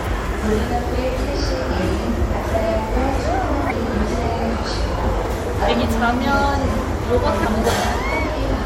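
At 3.67 to 3.72 s and again at 7.41 to 7.45 s, a brief glitch of about 44 ms cuts through the sound. This is damaged data in a compressed stream: corrupted bytes made the decoder misread those frames and lose sync until it found the next valid frame header.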